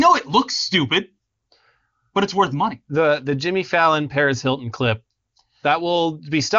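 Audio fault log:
No faults heard anywhere in this speech recording.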